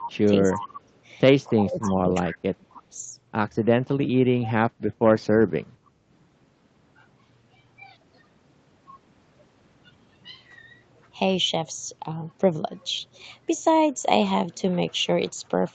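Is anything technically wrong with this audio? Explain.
Yes. Within the first three seconds there are two call-path faults.

Echo leak, at 0.0–0.08 s, 0.49–0.67 s and 1.8–1.92 s: a faint delayed copy trails the speech by about 0.29 s, about 15 dB down. This is likely a loudspeaker pickup the echo canceller failed to remove.

Speech suppressed in double talk, at 0.0–0.15 s, 0.42–0.92 s, 1.48–2.33 s and 2.57–2.99 s: the speech dips sharply, by roughly 20 to 30 dB at worst. The likely cause is the canceller ducking the talker while both sides spoke.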